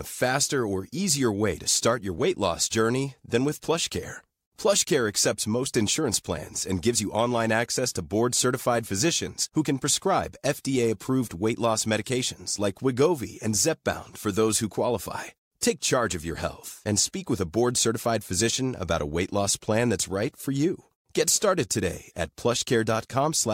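Nothing stands out here as a technical fault, so there's no moment in the speech to point to as going wrong.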